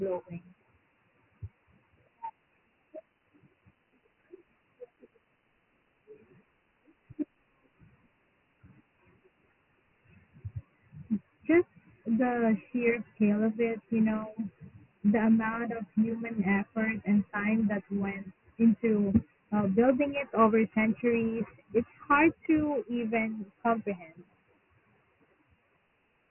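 The speech here has been squeezed through Dialogic VOX ADPCM, the 4-bit OKI-style coding used for phone menus and voicemail, running throughout the clip at a rate that fits 6,000 samples a second, about 24 kbps. Each sample only codes a coarse step from a prediction, so the damage is heavy: nothing survives above 3 kHz, leaving the speech dull and boxed-in, and a gritty, granular hiss rides along with it wherever it is voiced.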